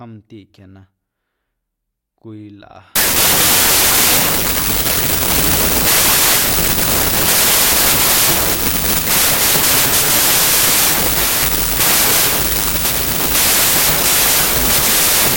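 From 2.96 s to the end, the speech collapses into loud noise with a faint voice beneath it, sped up by 1.33 times. That combination marks a wrong sample width, fitting packed 24-bit data read as 32-bit; a byte-order error keeps the speed unchanged.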